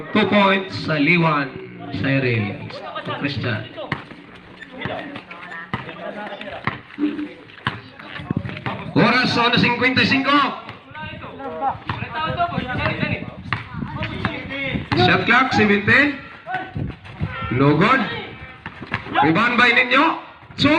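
No technical faults can be heard anywhere in this audio.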